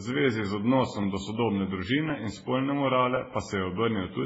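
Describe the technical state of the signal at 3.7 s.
At 3.7 s the speech carries the layered artefacts of transcoding between lossy codecs. It most likely passed through MP3 at 16 kbit/s and then Vorbis at 18.8 kbit/s. The second encoder spends its tiny bit budget re-coding the first one's artefacts and adds its own, so both sets of artefacts are heard together. Nothing is left above 7.6 kHz, which makes the top end dull and closed-in.

The moment also falls inside a run of clock drift buffer slips. They start at 1.03 s, just after "zvezi z odnosom", and run to 4.23 s. The cause is likely two devices on independent clocks that are off by several hundred ppm. Every 1.06 s the buffer between them overflows or runs dry, and a few dozen samples get dropped or repeated. That gives a regular tick, about four of them across the span, and 3.7 s sits between two of them.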